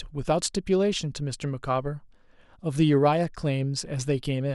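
No faults turn up anywhere in this recording; nothing breaks in or stands out as a problem along the way.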